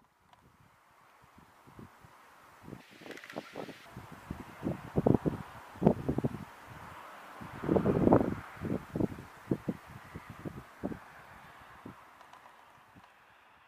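From 2.80 to 3.86 s, the audio is read two samples at a time. Each pair of samples is taken as one frame, so the sound plays at double speed and jumps up an octave, 12 semitones.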